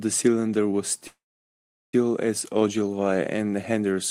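At 1.07 s the speech halts in a call audio freeze lasting until 1.94 s. The last sound is stretched into a brief fading buzz, then about 0.75 s of silence, and speech resumes exactly where it stopped, nothing lost but now 858 ms late. Likely cause: delayed packets draining the jitter buffer. On a spectrogram, a smeared band decays into an empty gap; the waveform shows a short tapering tail, then a flat line.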